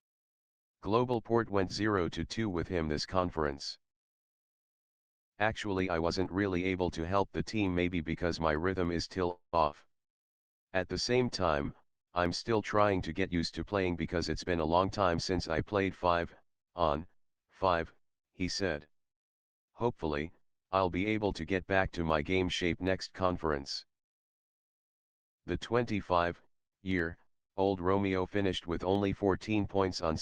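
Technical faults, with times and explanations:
9.31–9.55 s, call audio freeze: a fading buzz then about 120 ms of flat silence, likely from a drained jitter buffer; spectrogram shows smeared decay, then blankness, nothing lost.
13.23–15.16 s, jitter buffer speed-up: plays at 111% speed with unchanged pitch as roughly 0.2 s of pitch periods is trimmed; waveform looks compressed, harmonics stay level.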